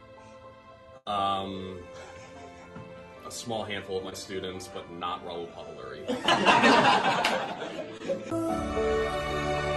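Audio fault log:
0.97–1.08 s, burst of packet loss: about 80 ms never arrived; the receiver stretched and faded the last sound across the gap, then resumed further on.
4.10–4.14 s and 7.98–8.02 s, short concealed packet loss: roughly 20 ms lost each time, patched by extrapolating the preceding sound, leaving a brief smear before blending back.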